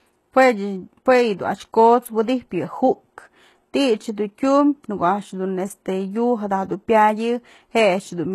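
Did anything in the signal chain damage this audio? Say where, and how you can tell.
Yes, at the codec stage, and it runs through the whole clip. The top end has a synthetic sheen: s sounds come out gritty and lispy, and the treble feels pasted on rather than belonging to the voice. Nothing at all sits above about 12.3 kHz. That's likely HE-AAC compression, where the upper band is rebuilt by copying lower content upward under a coarse envelope, so the harmonics don't line up. The damage is plainly audible, which fits a low bitrate around 16 kbps.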